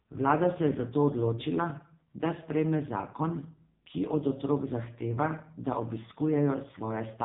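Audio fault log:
Throughout: AMR narrowband mobile codec; nothing above 3.7 kHz, and the heavily buzzy, synthetic speech fits a low 5.15 kbps mode starving the vocal-tract model of pulses.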